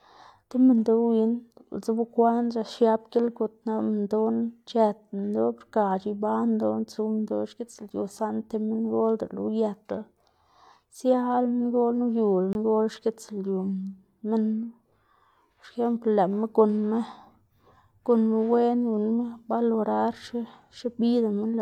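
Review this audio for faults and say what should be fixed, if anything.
CD skip at 12.53 to 12.55 s: the speech drops out for a very brief mute, heard as a small tick, and then resumes from a different point, so the flow of speech jumps abruptly rather than continuing where it left off. The laser was knocked off its track or thrown by a flaw on the disc and landed on a different turn of the spiral; the player silenced its output while it relocked, then carried on from the new position. To prevent it, re-rip or re-transfer that section from a clean, undamaged disc on a stable, vibration-free player, ideally with secure error-checked extraction.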